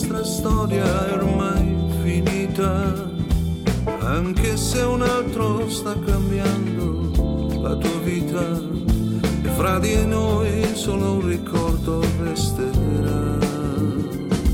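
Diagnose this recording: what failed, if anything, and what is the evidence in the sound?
Nothing in the recording points to a failure at any stage, from the wiring and converter through the buffers, format conversion, codec, network, storage and playback.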